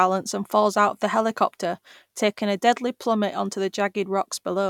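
No technical faults are audible.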